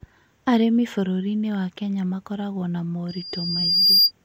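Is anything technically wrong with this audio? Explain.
Yes. From 3.08 s to 4.12 s, just after "makoragwo na", there is loudspeaker feedback squeal: a single tone at 4.8 kHz swells over about a second until it sits roughly 10 dB above the speech. A microphone is picking up the loudspeaker it drives, and at that frequency the loop gain exceeds one, so the tone feeds on itself. Unlike a steady interference whistle, it starts faint and keeps growing rather than appearing at full level.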